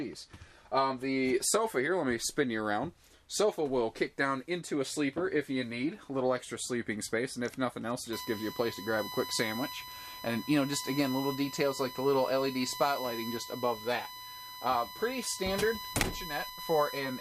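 From 8.13 s to the end, a steady 1 kHz whine sits only about 10 dB below the sound. This is USB whine: the bus draws current in 1 ms frames, and that pulsing leaks into the audio path through shared power or ground.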